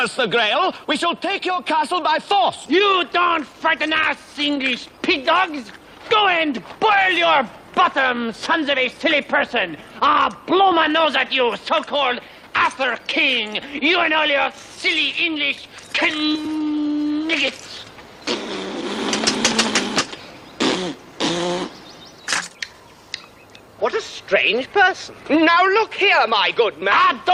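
The audio carries clock drift between sender and receiver: the sending clock runs roughly 5 percent fast, so the jitter buffer keeps overfilling and the receiver has to discard short pieces to hold latency steady, leaving small, unevenly spaced timing hiccups throughout. Those repeated timing corrections occur from 0.2 to 18.2 s and again from 20.2 to 27.3 s. The edits all go the same way, trimming material to match a sender running at 105 percent speed, and each one is small.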